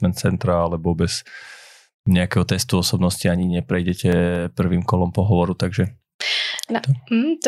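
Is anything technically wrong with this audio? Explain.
Yes, there are two faults. From 0.43 to 1.18 s the speech slows about 5.8% and drops roughly a semitone, then returns to normal, likely a drift correction step; unlike wow, the shift is one abrupt block. From 3.43 to 4.36 s, CD scratch ticks appear: five brief clicks, the longest about two milliseconds, at a steady once-per-revolution rhythm where damaged data was patched over, unlike random crackle.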